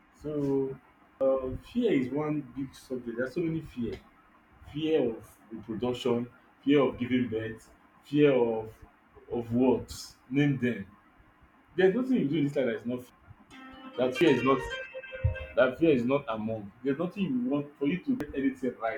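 Speech with four abrupt skips at 1.21, 13.10, 14.21 and 18.20 s, each a jump with no gap rather than a dropout's silence, likely a dropped buffer (overrun). About a tenth of a second vanishes at each, a third at 13.10 s.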